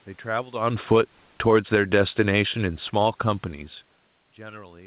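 From 0.47 s to 3.37 s, the automatic gain is falling. The gain control judged the input too loud, or its background noise too strong, and lowered its gain by about 6 dB over nearly three seconds. The speech starts loud, then sinks steadily, with the room noise sinking too.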